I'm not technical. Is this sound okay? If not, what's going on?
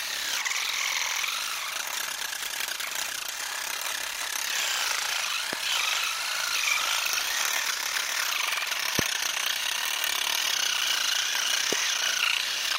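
No. There are three loud pops, sharp clicks or thumps landing on top of the sound at about 5.53, 8.99 and 11.73 seconds while the sound carries on underneath. Each is a sudden electrical jolt, likely from a plug, switch or static discharge.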